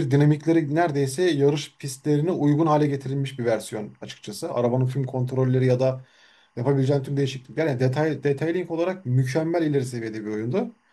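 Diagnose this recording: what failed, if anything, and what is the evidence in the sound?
Timecode bleed, in the analogue wiring. A faint chirping warble sits well below the speech for the whole clip. It flips between pitches near 1 and 2 kHz. Linear timecode at 23.976 frames per second is leaking in from a neighbouring track or cable.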